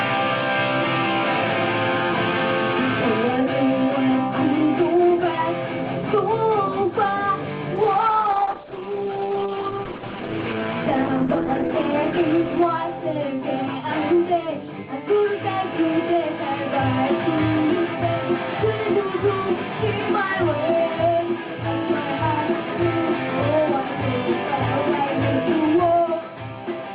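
From 7.76 s to 14.03 s a call bitrate drop makes the sound rough and watery, and its top end narrows from 12 kHz to 8 kHz for about 3.7 s. This fits Opus falling from roughly 32 to 10 kbps. The steady coarseness, with no gaps or glitches, sets it apart from packet loss.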